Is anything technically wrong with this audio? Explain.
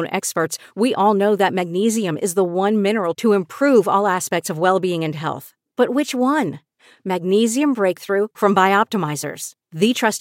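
Yes. At 4.51 s, between "to improve all aspects" and "of well being and", there is a single sharp click from dropped samples. A handful of samples, a fraction of a millisecond, are likely missing, so the waveform jumps abruptly. Unlike a dropout, no sound goes missing, only the click.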